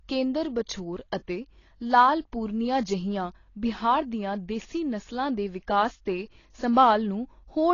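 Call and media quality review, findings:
Speech dull and smeared throughout, nothing above 7 kHz, warbly fizz on sibilants. Likely AAC compression, consistent with about 24 kbps AAC-LC. Codec damage plainly audible.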